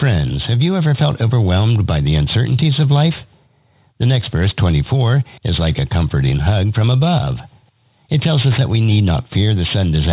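Aliasing runs through the whole clip: content above 4 kHz folds back into the band as gritty, metallic tones unrelated to the source, sitting roughly 15 dB below the signal, with energy pressed hard against the band edge. The fold point fits a drop to an 8 kHz rate without an anti-alias filter.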